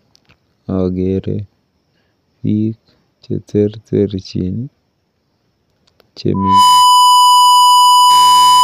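At 6.34 s a loudspeaker feedback squeal sets in and continues to the end of the clip at 8.63 s. A microphone is picking up the loudspeaker it drives, and at 996 Hz the loop gain has risen above one, so that frequency reinforces itself on every pass. The tone swells within about a third of a second into a steady, piercing squeal that sits roughly 10 dB above the speech and dominates it until the clip ends.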